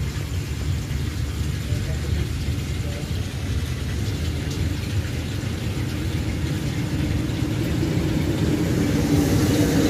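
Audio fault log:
3.18–3.96 s, drift correction step: playback slows by 5.67% and pitch drops 101 cents, about a semitone, then snaps back, likely a clock-matching resampler stepping its rate to refill a buffer. A spectrogram shows all harmonics shifted down together, then abruptly restored.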